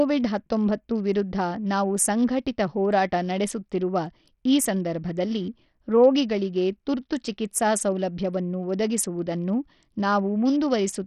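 From start to finish, the speech carries heavy coding damage, likely from Bluetooth SBC compression. Nothing is heard above 14.8 kHz. Below that, the treble thins and flickers, as the upper sub-bands get too few bits to hold steady. A gritty noise clings to the sound, and aliasing rides on it. The coarse quantising points to a small bit pool, which fits a low bitrate around 64 kbps.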